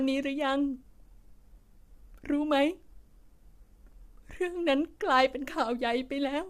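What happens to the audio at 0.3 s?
Low-delay AAC compression runs through the whole clip, including 0.3 s. The speech sounds rough and grainy, likely from AAC-ELD's short frames at a bitrate that points to about 32 kbps.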